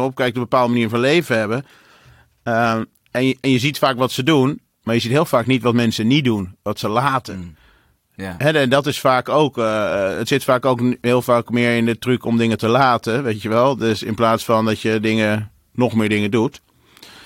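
No technical faults can be heard anywhere in the speech.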